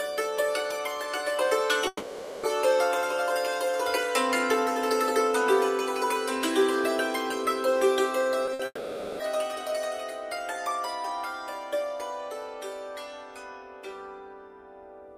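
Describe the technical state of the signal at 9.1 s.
At 9.1 s the signal is inside a long network dropout that runs from 8.65 to 9.21 s. The sound here is not the original audio. The likely cause is that packets stopped arriving and the receiver filled the gap itself, stretching the last sound into a fading buzz or hiss for about 540 ms. A brief silence of about 20 ms follows. Audio resumes at 9.21 s, with that half-second of content gone.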